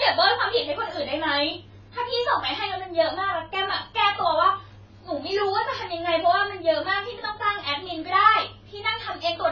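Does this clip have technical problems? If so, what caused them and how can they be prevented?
Yes. Throughout the speech the sound is dull and smeared, with a fizzy, warbling texture on sibilants and sustained vowels, and nothing above 7 kHz. The likely cause is heavy AAC compression. AAC-LC at a starved rate, which fits about 16 kbps, cuts the top band and quantises the rest so coarsely that parts of the spectrum vanish or turn to noise. A spectrogram shows a hard ceiling at 7 kHz with patchy, holed energy beneath. Encoding at 64 kbps or higher prevents this.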